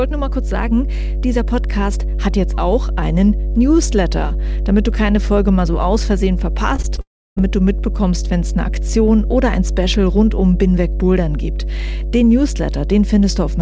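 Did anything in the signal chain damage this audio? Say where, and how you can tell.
Yes. In the analogue wiring there is mains hum: a steady 50 Hz tone with low harmonics runs through the whole clip at roughly the same level as the speech. That points to a ground loop or a nearby transformer coupling the power line into the signal.

On the network side, three short concealed packet losses fall at 6.76–6.80 s, 6.82–6.85 s and 6.95–6.99 s, each about 20 ms missing. Each one sounds like a brief smear or wobble, where the decoder carried the previous sound forward and then blended back into the real audio.

From 7.01 to 7.38 s there is a long network dropout of about 0.36 s, likely from packets never arriving. The receiver briefly extends the last sound, then it fades into about 0.31 s of near-silence before the audio resumes with that stretch missing.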